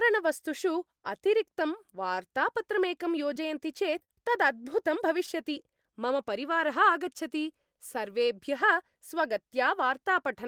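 Right after "अतिरिक्तं वार्तापत्रमेकं", at 3.33 to 3.37 s, there's a short concealed packet loss: about 20 ms of the call arrived too late, so the decoder extended the previous sound and crossfaded back. It happens again at 3.99 to 4.02 s, then at 4.04 to 4.10 s, where about 40 ms was missing and the patch is longest, and finally at 5.26 to 5.29 s. Each one comes through as a quick smear or wobble in the speech.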